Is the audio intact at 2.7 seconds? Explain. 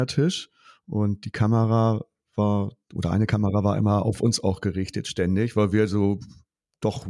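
Yes, the audio is intact at 2.7 seconds, with no fault audible at that moment.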